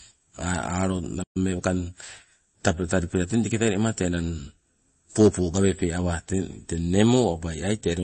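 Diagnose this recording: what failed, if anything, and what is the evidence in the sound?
The codec stage shows the damage. Across the whole speech clip the compression damage is plainly audible as a watery, swirling texture. This is likely MP3 compression at a low bitrate, which the sound suggests is around 32 kbps. With so few bits, the encoder zeroes weaker frequency lines that flicker on and off from frame to frame.

A second fault sits in the playback stage. At 1.23 s the speech stops abruptly, and it resumes at 1.37 s, leaving a silent gap of about 120 ms. A playback stall is the likely cause. The output ran out of data, or the thread feeding it was held up, so the device played silence until samples arrived again. Playback then continued.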